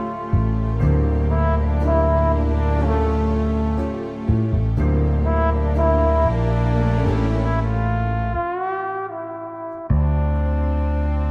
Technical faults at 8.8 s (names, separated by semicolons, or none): none